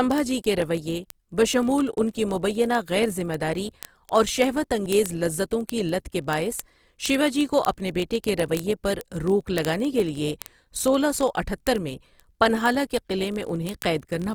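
Word clock ticks run through this speech recording from 0.11 s to the end at 14.35 s. They are sharp, uneven clicks repeating roughly every 20 ms, several hundred in all. The receiving device is running on its own clock rather than the sender's. The two rates differ by something on the order of 0.1 percent, so the clocks slip past each other about fifty times a second, and each slip drops or repeats a single sample and leaves a tick. Opus compression damage is plainly audible across the whole clip. The speech sounds grainy and rough, with noisy texture where tones should be clean, though the bandwidth stays full and content reaches to about 20.2 kHz. That character is likely the result of Opus in its CELT music mode at a low bitrate, which fits around 24 kbps. With so few bits, the encoder keeps each band's energy but fills the detail with folded or noise-like content.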